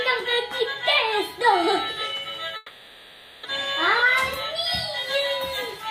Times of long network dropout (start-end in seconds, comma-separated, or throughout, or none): 2.56-3.45